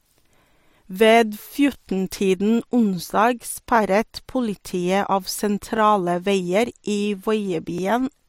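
A click or stutter recurs at 1.74 s, 3.76 s (just before "politiet av"), 5.77 s (between "politiet av" and "veier i") and 7.78 s. These are overlapping chunks: the speech was handled in 2-second blocks, each starting about 13 ms early, so that sliver plays twice at every join.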